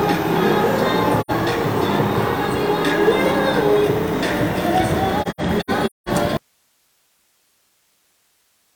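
At 1.21 to 1.31 s there is a short, soft-edged hole of about 85 ms, the sound of AAC frame loss with muting: the decoder had nothing to play and zeroed the spectrum, and the overlapping windows eased the sound out and back in. The length fits two frames of about 43 ms each. From 5.22 to 6.09 s the same fault returns in a broken pattern, with about 0.43 s missing in pieces scattered across roughly 0.85 s. The longest gap is around a fifth of a second.

At 6.37 s the sound cuts off abruptly and does not come back before the end. What remains is hiss about 45 dB below the signal. This is an audio dropout to a faint residue. The hard edge and the live hiss floor set it apart from the tapered, silent AAC holes earlier. The likely cause is that the source signal was lost while the path after the break stayed active.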